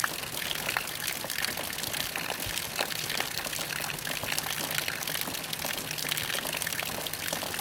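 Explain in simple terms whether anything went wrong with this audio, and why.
Nothing went wrong here; it's a sound recording, and nothing in it points to a technical problem you'd need to worry about.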